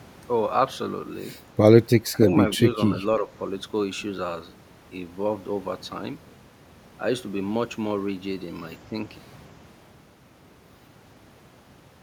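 The speech ducks sharply from 2.1 to 2.3 s, falling by roughly 10 dB, then sags more gently from 2.57 to 3.0 s and again from 3.18 to 3.3 s, each time by around 5 dB, so the level comes back in pieces. This is speech suppressed in double talk, likely caused by an echo canceller that heard the far side talking at the same moment, could not tell this talker from returning loudspeaker echo, and turned the outgoing signal down.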